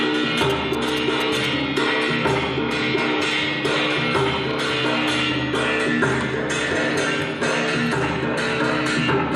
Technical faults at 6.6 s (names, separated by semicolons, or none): none